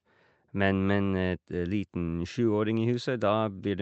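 No technical faults are audible in this speech.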